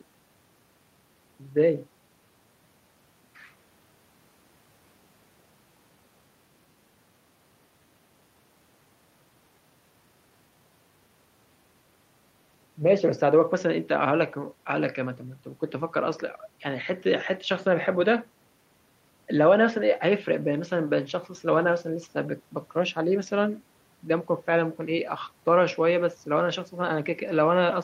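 No technical faults can be heard anywhere in the speech recording.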